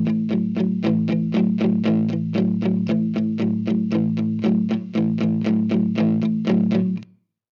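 Nothing in the audio stood out as a technical problem on listening.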